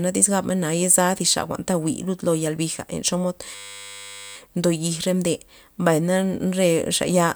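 A speech clip with one system hang loop from 3.55 to 4.36 s. A 10 ms slice of audio repeats exactly, over and over, so the speech turns into a steady buzz at 100 Hz. The loop length points to a 10 ms ring buffer. The computer or driver stalled, and the sound hardware kept replaying that same buffer until the system recovered. Little or no speech seems to be missing afterwards.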